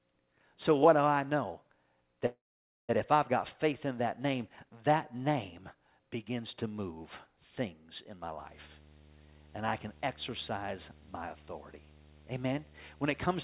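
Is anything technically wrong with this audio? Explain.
Yes, there are two faults in this speech.

From 2.26 to 2.91 s, just before "if I've got faith", the sound stretches into a fading buzz and then about half a second of silence. This is likely a call audio freeze: delayed packets emptied the jitter buffer.

From 8.39 s to the end, a steady 75 Hz buzz with hash above it sits about 25 dB under the speech, starting after "move things in my". This is video or display buzz from a screen or cable coupling into the audio at its field rate.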